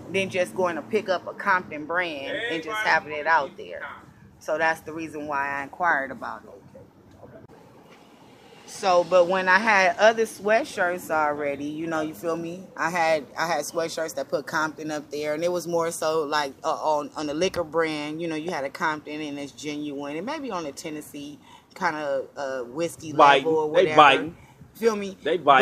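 At 17.56–17.59 s a single loud pop, roughly 10 dB above the sound, likely a voltage spike; unlike a dropout, the sound continues underneath it.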